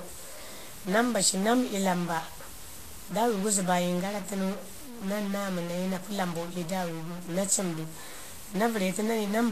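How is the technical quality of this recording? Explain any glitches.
Technical quality is poor, with two faults running through the whole speech clip.

Stuck bit: distortion throughout, with hiss filling the pauses, likely one data bit stuck and throwing off about half the sample values.

Vorbis compression: grainy, hissy treble and softened attacks throughout, with nothing above 14.2 kHz, likely low-quality Vorbis coding, roughly consistent with about 35 kbps.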